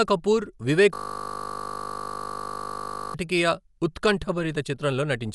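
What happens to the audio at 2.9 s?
The sound is caught in a system hang loop from 0.94 to 3.14 s: the hardware keeps replaying one 20 ms slice of buffer, producing a steady 50 Hz buzz rather than the gaps of a dropout. Underneath, the band stops near 11.5 kHz and tones carry a rough, fluttering noise, likely from Dolby Digital compression at a low bitrate, which fits roughly 64 kbps. That flutter is what separates it from a simple low-pass filter.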